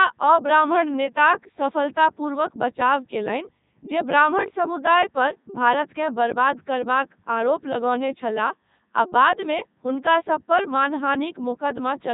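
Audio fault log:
throughout, Codec 2 vocoder: heavily robotic, buzzy speech, nothing above 3.8 kHz, resynthesised from sine waves; sounds like its 3.2 kbit/s mode.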